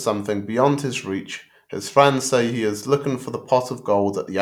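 No technical faults can be heard anywhere in the recording; the speech signal arrives intact, with nothing in its level, continuity or timing that points to a problem in the chain that captured or carried it.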